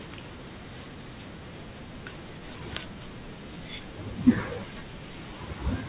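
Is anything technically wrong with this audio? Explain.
Yes. Aliasing runs through the whole speech clip. The audio was resampled down without an anti-alias filter, which fits a drop from 48 kHz to 8 kHz, so energy above the 4 kHz fold point reflects back into the band at false, unrelated frequencies, roughly 15 dB below the speech. Sibilants sound gritty and metallic. A spectrogram shows energy packed hard up to a sharp 4 kHz ceiling, with mirrored, downward-bending traces where high frequencies fold back.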